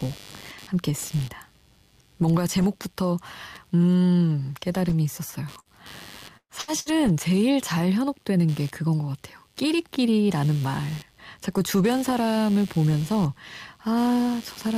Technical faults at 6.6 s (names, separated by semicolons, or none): computer activity noise; burst of packet loss